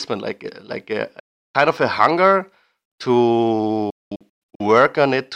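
At 1.19 s the speech cuts to silence until 1.55 s, a hole of about 0.35 s. Between 3.90 and 4.61 s it breaks up again: about 0.49 s goes missing in several gaps, the longest 0.21 s. Both are likely Bluetooth dropouts, with late packets discarded. Unlike a buffer underrun, which pauses and then continues from the same point, the speech here resumes further along, as if it had kept playing through the silence.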